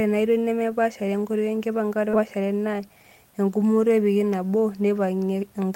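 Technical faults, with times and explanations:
2.13–2.15 s, skip ahead: roughly 0.4 s of speech is dropped and playback jumps forward with no gap, so the waveform shows an abrupt splice with no silence.
2.72–3.04 s, jitter buffer speed-up: about 50 ms of pitch periods are trimmed, so speech runs at 112% with unchanged pitch before "engumoto epikii"; harmonics stay level while the spectrogram's syllables compress.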